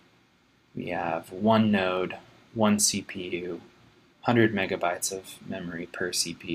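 No technical faults can be heard anywhere in the audio.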